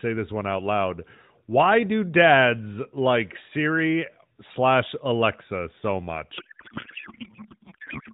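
From 6.38 s to the end the speech collapses into garbled warble and noise: a codec payload misread, octet-aligned AMR frames being unpacked as bandwidth-efficient, so every field lands wrong.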